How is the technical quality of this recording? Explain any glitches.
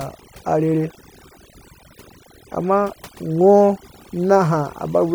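The recording is held back by one fault that runs through the whole clip: overdone noise removal. A noise reduction stage was pushed too hard, so every frequency band that drops near its noise estimate gets cut almost to silence, and the softer parts of the speech are removed along with the noise. The gaps fall to near silence dotted with twinkling specks. Unlike a noise gate, which mutes everything at once, this works band by band, which is what leaves those scattered specks behind.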